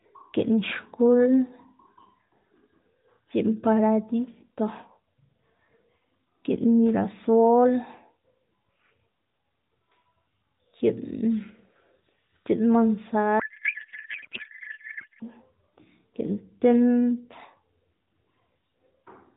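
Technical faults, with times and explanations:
13.40–15.24 s, codec payload misread: for just under two seconds the speech turns into garbled noise and warble that barely tracks it. The stream is AMR narrowband, with light coding damage at a quality that fits the 12.2 kbps mode. Here the frames were packed octet-aligned but unpacked as bandwidth-efficient, so every field is read from shifted bit positions. The decoder synthesises nonsense from misplaced parameters until both ends agree on the packing again.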